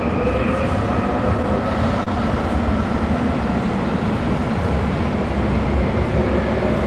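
At about 2.03 to 2.08 s there's a short stall from a late packet: the jitter buffer ran dry, so the receiver stretched the last sound for about 30 ms, then resumed right where it left off. Nothing's lost, just a brief held smear with a slight buzz or dip, heard through the call codec's roughly 12 kHz top end.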